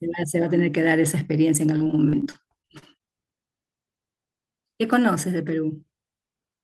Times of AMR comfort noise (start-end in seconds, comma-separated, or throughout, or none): none